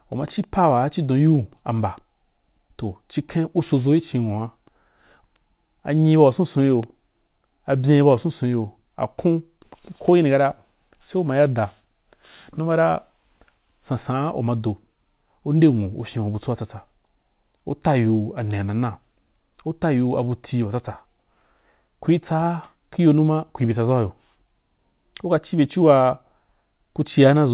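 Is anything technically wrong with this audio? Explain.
No, nothing stood out on listening to this speech, which sits within the narrow band of a telephone-style call path with no content above about 4 kHz, as expected of G.711 mu-law at 64 kbps.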